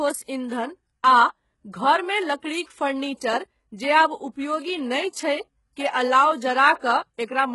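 Speech, with heavy HE-AAC compression damage throughout: the treble sounds bright but synthetic, with s sounds turning gritty and metallic, and nothing above 11.5 kHz. The likely cause is spectral band replication, which rebuilds the upper band by copying lower bands upward under a coarse envelope, so the rebuilt harmonics don't line up with the real ones. The damage fits a very low bitrate, around 12 kbps. A plain low-pass filter would sound dull, not bright, and standard AAC or MP3 would smear the treble into swirly artefacts without this copied, metallic sheen.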